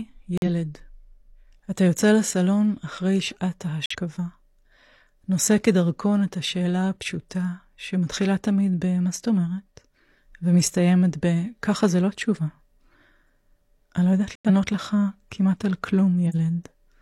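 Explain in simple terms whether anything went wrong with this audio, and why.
Three short gaps cut into the speech. They come at 0.37 to 0.47 s, 3.86 to 3.95 s, and 14.35 to 14.51 s. Each one drops to silence all at once, then the speech picks up again on time. This is corrupt frame muted. The audio is sent in small compressed chunks called frames. Some chunks arrived damaged. The player could not read them, so it played silence in their place. Each gap is about a tenth of a second or a bit more, the length of one or two chunks.

Near the end, from 16.29 to 16.35 s, there is a quick burst of harsh noise, like a squeak or blip. This is corrupt frame decoded. Again a chunk arrived damaged. This time the player did not throw it out. It tried to play it, and the scrambled data came out as sound at the wrong pitches. The burst lasts only a few hundredths of a second, which points to one or two damaged chunks.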